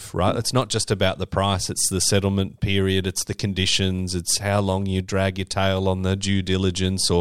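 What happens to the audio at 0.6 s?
At 0.62 s, just before "just about the price", there's a bit error spike: one flipped bit jumps a single sample to about -19 dBFS, giving a sharp, broadband tick.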